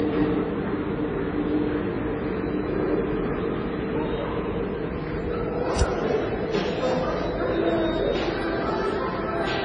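Throughout, the sound is dull above 9.4 kHz and layered with mixed smearing and swirly artefacts, likely transcoding between lossy codecs, fitting AAC then WMA at very low bitrates.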